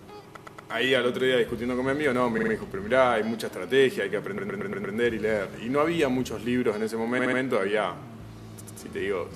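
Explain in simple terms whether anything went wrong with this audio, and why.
The audio stutters five times because of repeated frames. A short chunk of the compressed audio was stored or sent more than once, so the player repeats it. At 0.35 to 0.70 s, a 116 ms chunk plays three extra times. At 2.37 to 2.51 s, a 46 ms chunk repeats three times. At 4.37 to 4.95 s, a 116 ms chunk repeats five times. At 7.18 to 7.39 s, a 70 ms chunk repeats three times. At 8.59 to 8.78 s, a 93 ms chunk repeats twice. Each repeat makes the clip a little longer.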